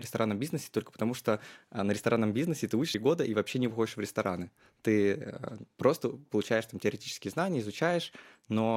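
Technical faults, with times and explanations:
2.94 s, damaged data in a compressed stream: a brief glitch cuts into the speech where a corrupted stretch of the compressed data reached the decoder. The decoder misread or discarded the affected frame, lost sync and had to hunt for the next valid frame header before clean audio resumed. On a spectrogram this shows as a thin vertical break in the normal speech pattern. On the waveform it appears as a short, abrupt discontinuity.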